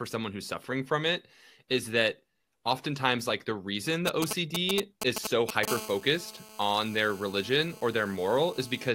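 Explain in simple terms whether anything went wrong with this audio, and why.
A mobile phone using the older 2G network was close to the recording equipment, and its radio signal leaked into the audio circuit. From 4.08 s, right after "like the reason the", until 5.65 s, you hear GSM signalling bursts: the phone was briefly talking to the network, and the circuit turned those radio pulses into sound. The result is a galloping dit-dit-dit of short buzzes, roughly as loud as the speech itself.

From 5.68 s to 8.89 s, the same phone switches to a call. This produces the steady GSM phone buzz, because the phone sends its radio pulses 217 times a second and the audio circuit turns each pulse into a click. So many clicks so close together merge into a hard, raspy buzz at 217 Hz that runs under the speech until the end of the clip. It is clearly quieter than the speech, and it has nothing to do with what is being said.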